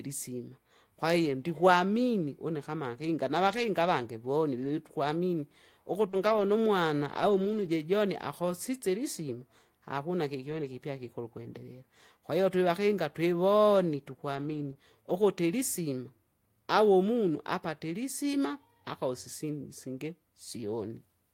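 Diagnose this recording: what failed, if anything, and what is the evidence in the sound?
At the network stage, audio arrived too late for the decoder around 6.09 to 6.15 s. Concealment extended the preceding speech to cover about 40 ms of missing audio, so a brief smear or wobble is heard there before the real signal blends back in.

Further network loss from 6.13 to 6.43 s was recovered as lost packets rebuilt from error correction. Each gap was filled from the low-bitrate copy carried in the following packet, so about 160 ms of speech plays without a dropout but sounds rougher and grainier, consistent with eight separate packets lost.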